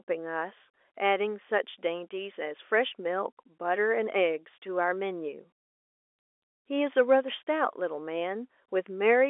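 There are no technical faults to describe in this speech clip, which carries the narrow band of an ordinary telephone line throughout.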